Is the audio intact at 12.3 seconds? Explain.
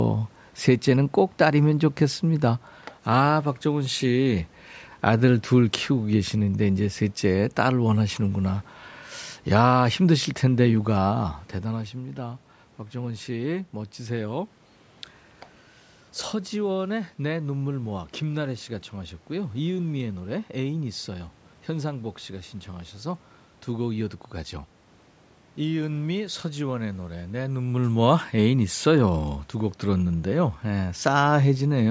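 Yes, the audio at 12.3 seconds is intact, with no technical fault at that moment.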